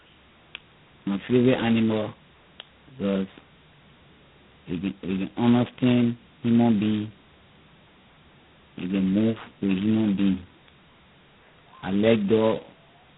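Throughout, tandem speech coding: two speech codecs in a row each re-code already degraded speech. It sounds rough, noisy, muffled and warbly, with nothing above 3.8 kHz.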